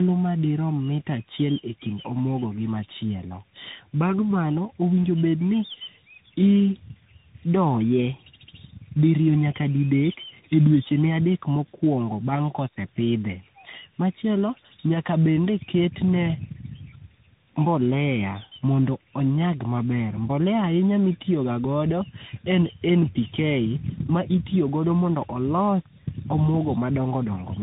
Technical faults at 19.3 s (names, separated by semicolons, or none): tandem speech coding